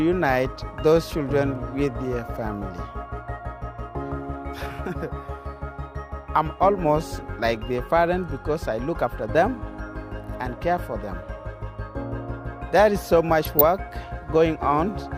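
The audio carries a short burst of DAB burbling from 13.41 to 13.61 s, a patch of burbling sub-band artefacts laid over the programme for about 0.2 s. Weak reception let bit errors slip past the error correction into the MP2 data, corrupting samples into short noise blips and scale factors so individual sub-bands jump in level for up to a frame. The burst hits roughly a dozen damaged frames, consistent with a bit error rate of a fraction of a percent.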